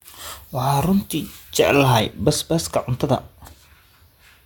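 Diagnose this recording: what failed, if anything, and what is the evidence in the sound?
Pre-emphasis left on, 0 to 2.0 s, before "basbaaska cuntada": with no 50 µs de-emphasis, treble sits about 10 dB high at 10 kHz, sibilant.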